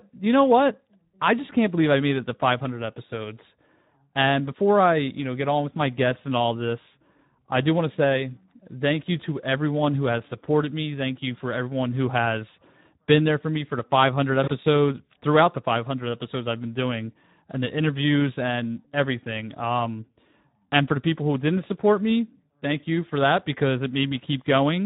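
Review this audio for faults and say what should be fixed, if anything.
Speex codec damage runs through the whole speech clip: the voice is plainly hoarse and noisy, consistent with a low bitrate near 11 kbps starving the CELP excitation. On a spectrogram, harmonics look smeared and grainy, with any band above 4 kHz showing only diffuse noise fill. Encoding at a higher Speex quality setting or switching to a modern wideband codec would prevent it.

VoIP packet loss concealed by the speech codec occurs from 14.43 to 14.50 s. About 40 ms went missing, which fits two lost frames, and the decoder extended the last pitch and filter with fading gain. The waveform shows a repetitive, decaying stretch. Jitter buffering and forward error correction on the network path would prevent it.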